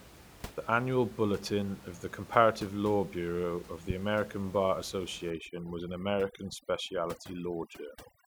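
Overdone noise removal sets in at 5.30 s and runs to the end of this speech recording at 8.27 s. Up to that point the room noise sits about 20 dB beneath the talker. From there, a noise reducer pushed too hard cuts individual frequency bands whenever they come close to its noise estimate. The background drops and breaks up into twinkling specks, and the softer parts of the voice are stripped away with it.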